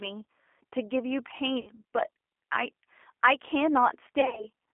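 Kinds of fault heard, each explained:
G.729 codec: the speech runs through an 8 kbit/s low-rate VoIP codec that resynthesises it from a vocal tract filter and a few pulses per frame, giving plainly audible roughness; a spectrogram shows nothing above about 3.4 kHz and smeared, grainy harmonics.
VoIP packet loss concealed by the speech codec: lost packets, 60 ms near 1.6 s and 100 ms scattered over 160 ms from 4.2 s, are filled by the decoder stretching its last pitch into a fading buzz, seen as flat, repeated harmonics and a decaying waveform envelope.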